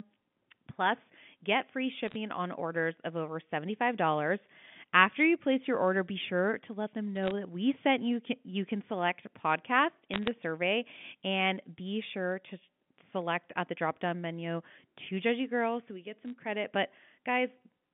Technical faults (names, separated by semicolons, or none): bit errors on a digital phone line